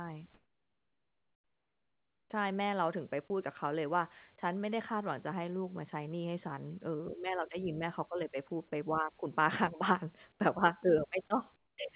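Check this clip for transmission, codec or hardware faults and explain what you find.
Two faults appear in this speech clip, both from discontinuous transmission on a narrowband call path whose audio stops at 4 kHz.

Comfort noise in place of the background occurs at 0.34 to 2.3 s, 10.32 to 10.4 s and 11.56 to 11.78 s. In these pauses the real room background gives way to a smooth, featureless hiss, about 14 dB quieter in the first and last stretches and about 8 dB quieter in the middle one. The likely cause is a sender that stopped transmitting during silence, leaving the receiver to synthesise noise shaped roughly like the background. Unlike a dropout or a noise gate, the gap never goes truly silent, and the real background returns as soon as speech resumes.

Sound dropped by the voice detector occurs at 3.28 s and 11.28 s. Each time, roughly 10 ms of genuine sound is lost and the same flat synthetic noise fills the break. 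The likely cause is the voice detector briefly mistaking a sound for background and cutting transmission. Packet-loss concealment would fill a gap with a smeared repeat of the preceding sound. Here the gap is filled with plain noise.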